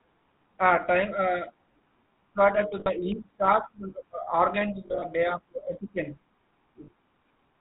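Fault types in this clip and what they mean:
GSM full-rate codec: The first GSM speech codec runs through the whole clip, and its damage is plainly audible. It models the vocal tract and drives it with a sparse train of regular pulses, keeping only every third excitation sample. Nothing above 4 kHz gets through, so the speech sounds dull and band-limited. The coarse excitation adds a constant buzzy, gravelly roughness. The overall character fits a 13 kbps full-rate stream.
Lost GSM frames: Three short dropouts occur, where the decoder covered missing frames by repeating the last good frame's settings. At 2.8 s a 60 ms gap becomes a brief metallic ring. At 4.86 s, just before "day of", 100 ms of losses are scattered over about 160 ms, with the longest run around 40 ms. This gives a rough, metallic ring. At 6.84 s a 40 ms loss leaves a short metallic ring.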